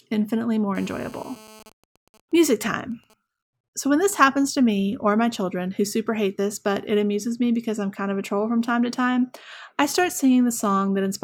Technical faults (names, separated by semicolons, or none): GSM phone buzz; GSM signalling bursts